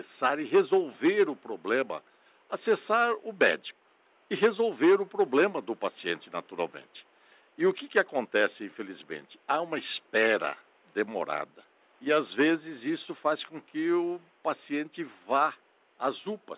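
No technical faults are audible.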